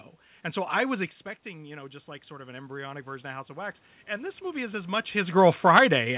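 From 1.53 s to 5.01 s there is automatic gain rising. Shortly before, around 1 s, the talker moves back and the level at the microphone falls by about 12 dB. The gain control then climbs slowly, adding about 8 dB over roughly three and a half seconds, so the voice and the room noise swell up together rather than the voice alone recovering. Through the band-limited G.711 path, this is heard as a gradual rise in level.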